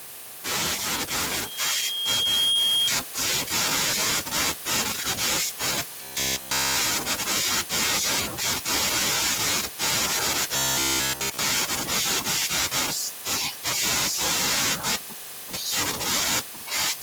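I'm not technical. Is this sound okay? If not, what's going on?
No. From 1.16 to 2.91 s there is loudspeaker feedback squeal: a microphone is catching its own loudspeaker, and a high whistle near 3.2 kHz swells over about a second and a half. Unlike a steady hum or beep, it grows louder by itself.

At 6.03 to 6.77 s and again at 10.56 to 11.39 s the speech turns into robotic sound from repeated short buffers. A flat metallic buzz at 66.8 Hz replaces the natural voice. It is likely caused by the same tiny chunk of about 15 ms being replayed because new audio arrived late. Unlike the feedback, it is a low buzz rather than a rising whistle.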